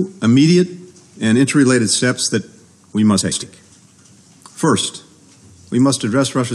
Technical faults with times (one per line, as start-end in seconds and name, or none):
3.21-3.43 frames out of order
4.80-4.86 frames out of order